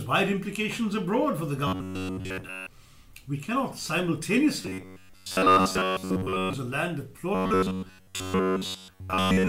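Three stretches of the audio go robotic, from 1.67 to 2.69 s, from 4.62 to 6.53 s, and from 7.35 s through to the end. Each has the same rigid, metallic buzz at 93.8 Hz laid over the sound. That's the signature of robotic sound from repeated short buffers: the likely cause is audio arriving too slowly, so a slice of roughly 10.7 ms keeps getting replayed for most of each stretch while the real signal is dropped.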